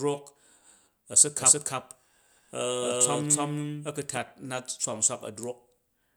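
From 1.39 to 4.17 s a doubled audio track appears: a second, equally loud copy trails by roughly 300 ms, likely from a slower capture path.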